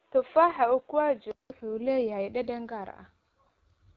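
From the start to 1.5 s the speech sounds dull and boxy, with nothing above 4 kHz. This is most likely an input switched to a poorer device, such as a headset in its call profile, with a narrower band and its own faint noise floor, roughly 40 dB below the speech. At 1.5 s a gap of about 190 ms breaks the sound, and then "leeyahay dhadhan gaar" comes through brighter and roughly 5 dB different in level. On a spectrogram the energy is capped at 4 kHz before the gap and then widens abruptly. A waveform shows the flat break and a step in level.

Across the whole clip the speech carries the AMR wideband (HD Voice) codec at 8.85 kbit/s, one of its two lowest rates, and the damage is plainly audible. The vocal tract model gets too few bits to render the speech faithfully, so it sounds rough and raspy. The spectrogram stops sharply at about 7.5 kHz. Above 6.4 kHz the uppermost band looks like smeared, uniform noise rather than clear harmonic structure.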